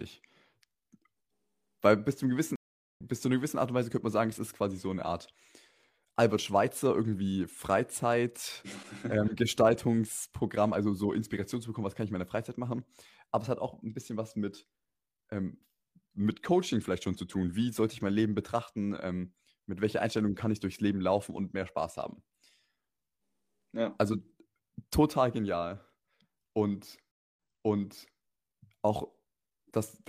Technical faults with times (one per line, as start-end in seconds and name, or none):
2.56-3.01 stream reconnect
27.11-28.20 stream reconnect